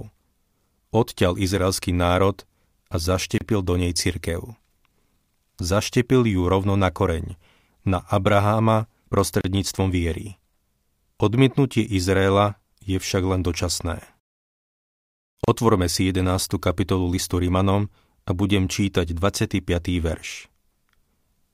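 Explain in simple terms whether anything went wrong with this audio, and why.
Speech briefly drops out for 30 to 34 ms at 3.38, 9.41 and 15.44 s: a gap at a join of encoded pieces, where leftover encoder padding was never trimmed.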